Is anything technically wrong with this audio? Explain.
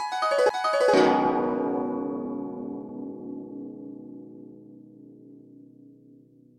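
Yes, this music clip has two distinct playback faults close together near the start.

At 0.49 s there is a CD skip: the laser lost tracking and landed on a different turn of the disc's spiral. The player mutes very briefly, only a few milliseconds, producing a tick, then resumes from a displaced point in the music.

From 0.93 to 0.95 s there is a skip ahead: a block of audio was discarded, either in transit or by an overflowing jitter buffer, while later material was already queued. Around 0.4 s of music is missing, with no fill, so the two sides butt together abruptly.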